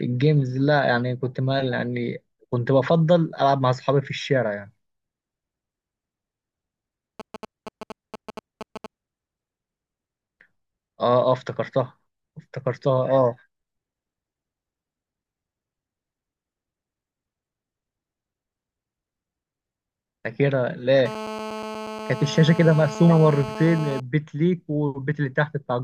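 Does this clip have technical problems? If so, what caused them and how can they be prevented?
Yes. From 7.20 to 8.86 s there are GSM signalling bursts: a galloping run of ticks and brief 217 Hz buzzes, roughly 10 dB below the speech. A nearby 2G phone was exchanging short control transmissions, and the audio circuit rectified the radio pulses into audible clicks. Keeping phones at least a metre from microphones, cables and interfaces, or switching them to airplane mode, prevents this.

From 21.06 to 24.0 s a GSM phone buzz appears. It is a steady, raspy 217 Hz tone with strong harmonics, about 12 dB below the speech. A phone on an active call transmitted continuously in 217 Hz bursts, and the circuit rectified them into this buzz. Well-shielded, balanced cabling and RF-filtered inputs reduce the interference, but keeping phones away from the recording chain is the reliable fix.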